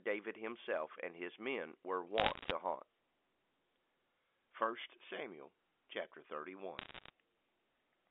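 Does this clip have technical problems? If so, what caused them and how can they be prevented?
Yes. Bit errors on a digital phone line flipped bits in G.711 samples from 2.18 to 2.52 s and from 6.79 to 7.10 s, at rates of about 1% and 0.7%. Each hit corrupts a single sample, so the speech underneath stays intact but picks up bursts of sharp ticks and crackle. Error-checked or cleaner transmission links, with concealment of damaged samples, would prevent this.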